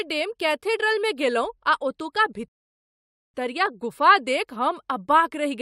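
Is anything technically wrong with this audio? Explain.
Yes. There is a rebuffering stall from 2.48 s to 3.34 s. The player's buffer of downloaded audio ran dry, so playback halted and waited for more data before continuing. The speech cuts abruptly to silence for about 0.86 s, then picks up at exactly the point where it stopped. No speech is skipped or repeated. The pause simply adds that time to the clip and breaks the natural rhythm of the delivery.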